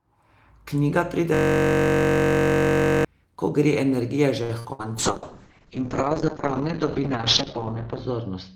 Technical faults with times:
1.34-3.05 system hang loop
4.43-4.51 short stall from a late packet
4.59-4.93 burst of packet loss
4.97-8.55 call bitrate drop

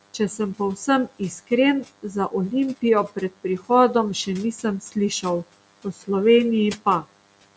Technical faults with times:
0.00-7.57 DECT cordless phone buzz
0.14-1.51 speech cut by the noise suppressor
1.84-2.33 speech cut by the noise suppressor
2.77-3.70 speech cut by the noise suppressor
4.26-6.09 speech cut by the noise suppressor
6.76-7.16 speech cut by the noise suppressor

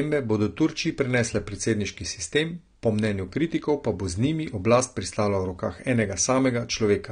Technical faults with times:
0.00-7.12 AAC compression

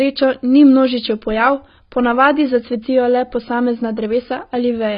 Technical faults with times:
0.00-4.97 AAC compression

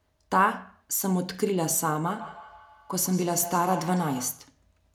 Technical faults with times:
2.10-4.54 feedback echo between two devices

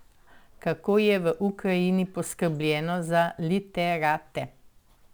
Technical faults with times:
0.00-5.13 sample clock jitter

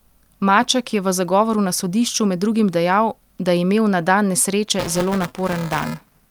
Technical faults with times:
4.78-6.30 buffer tearing

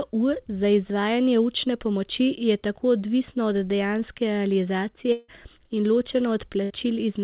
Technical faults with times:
5.12-5.30 long network dropout
6.64-6.72 burst of packet loss

